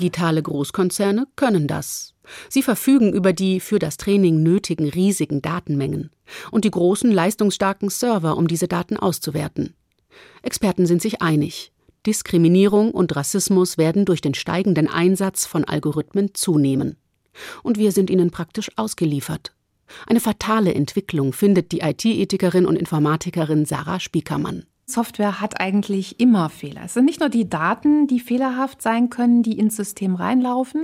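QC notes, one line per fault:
0.15–30.81 s, clock slip clicks: regular ticks roughly every 50 ms, about twenty a second, likely from two unsynchronised clocks around 400 ppm apart dropping or repeating single samples. A spectrogram shows evenly spaced thin vertical broadband lines, and the waveform shows tiny step discontinuities.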